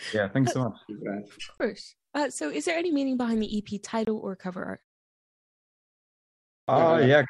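At 1.58 to 1.60 s and again at 4.05 to 4.08 s, just before "or cover art", the speech cuts out for about 23 ms each time, most likely a Bluetooth dropout, where a single audio packet fails to reach the headphones in time. After each gap the speech resumes as if it had kept playing underneath.

At 6.64 s, after a silence of about 1.9 s, the playback device appears to have gone to sleep and needed time to wake, producing a clipped start after a pause. The first 39 ms of the returning speech are swallowed, so it begins abruptly out of silence.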